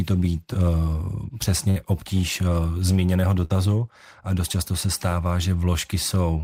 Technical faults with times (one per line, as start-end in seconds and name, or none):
0.53 short concealed packet loss
1.70-1.77 burst of packet loss
3.45-3.51 burst of packet loss